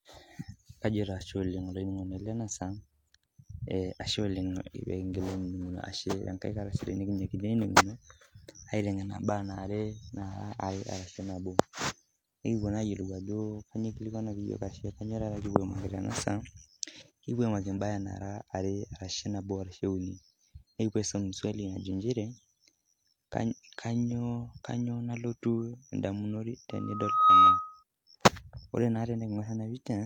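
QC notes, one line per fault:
12.96 s and 15.37 s, dropped samples: each is a single sharp click, a brief vertical streak across the spectrum with no audible gap in the speech. The likely cause is that a couple of samples went missing from the stream, so the waveform jumps straight from one value to a later one. That step discontinuity spreads energy over all frequencies for an instant, which is heard as a click.
26.70–27.83 s, loudspeaker feedback squeal: a steady tone at 1.3 kHz swells over roughly 0.7 s and peaks at about 15 dB above the speech before it stops. The microphone is picking up the loudspeaker it feeds, and at this one frequency the loop gain exceeds unity. Each trip around the loop reinforces the tone, so it grows into a squeal until it stops at 27.83 s.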